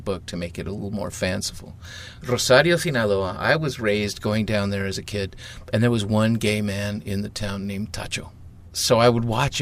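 No technical faults can be heard anywhere in the audio.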